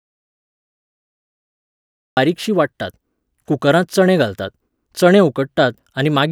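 From the start to 2.17 s, an audio dropout to silence leaves a flat waveform and blank spectrogram with no room tone, likely from a lost input, before the speech cuts in.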